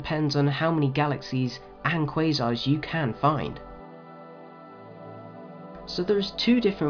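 No technical faults can be heard anywhere in the recording. Nothing in the sound suggests a break, a glitch or damage at any point.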